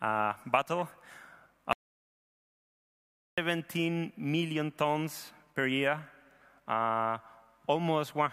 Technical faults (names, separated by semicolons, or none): audio dropout to silence